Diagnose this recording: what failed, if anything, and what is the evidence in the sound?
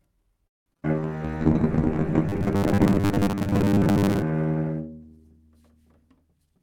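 Network first: from 0.47 to 0.86 s there's repeated packet loss (robotic sound). Five separate holes in under 0.4 s, the longest about 186 ms, get patched by stretching out the last bit of audio. Those patches account for 224 ms in total, and another 80 ms are simply missing. More than half of that stretch is concealment rather than real signal, which explains why it sounds choppy.

Right after that, at 0.92 s, a call bitrate drop begins and lasts until 6.42 s. The sender's bandwidth estimate fell, so the encoder went from 40 kbps down to 6 kbps. It stayed at the bottom for about 1.6 s. At that rate Opus codes coarsely and cuts the top end, so the sound turns dull, watery and rough across most of the clip.

From 1.18 to 1.39 s there's a jitter buffer slow-down. The receiver was short of audio, so it repeated pitch-period-sized chunks several times over to rebuild its reserve. That added 51 ms, and the passage plays at 81% speed. 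The pitch stays the same, so what you hear is sound that's drawn out rather than lowered.

Between 2.29 and 4.22 s the sound picks up a rigid buzz at 100 Hz, which is robotic sound from repeated short buffers. The likely cause is audio arriving too seldom at the driver or buffer stage, with the last 10 ms looped to fill in. That's why the buzz sits at exactly one over 10 ms. Most of that span is repeats, but the rough outline of the original sound still comes through.

At the tail, from 6.38 to 6.60 s, there's a jitter buffer speed-up. Too much audio had piled up in the buffer, so the receiver cut out short pitch-period slices, about 70 ms in total, to bring the delay back down. The pitch doesn't change, but the sound runs at 125% speed and comes across as hurried right at the end.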